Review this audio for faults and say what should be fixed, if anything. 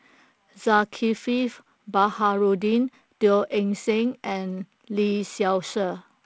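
No faults found here; nothing needs fixing.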